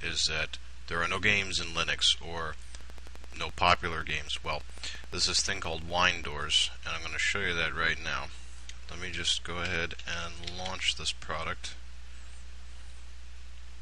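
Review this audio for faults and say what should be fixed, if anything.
A train of clicks runs from 2.81 to 6.33 s: about forty evenly spaced pulses at 11.7 per second, a few dB above the sound, likely from interference or a faulty connection. A spectrogram shows regularly spaced vertical lines, and the waveform shows similar repeating spikes. Shielding cables, moving away from nearby equipment and checking the audio interface would prevent it.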